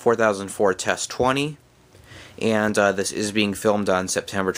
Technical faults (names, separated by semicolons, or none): none